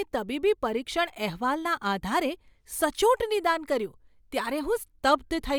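Nothing goes wrong anywhere in this bit of speech, so there's no fault to point out here.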